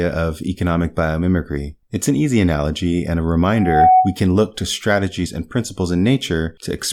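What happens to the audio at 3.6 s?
A loudspeaker feedback squeal runs from 3.54 to 4.18 s, after "easy analogy and a": the mic-speaker loop rings at 744 Hz, swelling over roughly 0.3 s to about 10 dB above the speech.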